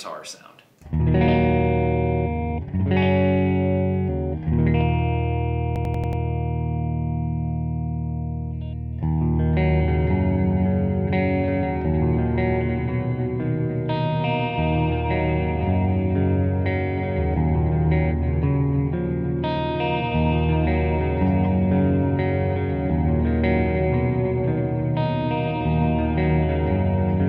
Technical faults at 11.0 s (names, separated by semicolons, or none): none